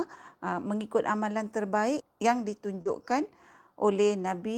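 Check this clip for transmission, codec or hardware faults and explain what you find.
Two transmission faults occur together, right after "mengikut amalan terbaik yang".

Short concealed packet loss, 2.81 to 2.87 s: about 40 ms of the call arrived too late for the decoder, and the receiver covered 38 ms of it by extending the preceding sound, following its pitch where it was voiced and using shaped noise where it was not, before fading back into real audio. The result is a brief smear or wobble where the speech loses its crispness.

Lost packet rebuilt from error correction, 2.85 to 2.87 s: the last 20 ms of that stretch was restored from a low-bitrate duplicate carried in the next packet, which points to a single lost packet recovered through Opus in-band forward error correction. There is no gap here, but those 20 ms sound rougher and noisier than the audio on either side, so the end of the smear has a grainy texture.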